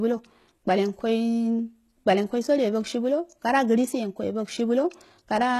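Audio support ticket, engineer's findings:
Gritty, lispy s sounds throughout; likely HE-AAC compression, treble copied up by band replication, fits roughly 16 kbps. Spectrogram: repeated-looking upper bands, empty above 12.3 kHz.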